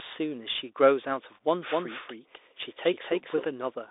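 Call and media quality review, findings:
Bluetooth CVSD headset codec, whole clip. Band roughly 300 Hz to 3.7 kHz, nothing above 3.8 kHz. Granular hiss, scratchy s sounds, slope overload on loud highs. Fits 64 kbps CVSD.

Doubled audio track, 1.68 to 3.44 s. Full-band copy about 5 dB quieter, around 300 ms late, abrupt start and stop, no decay. Likely a slower second capture path.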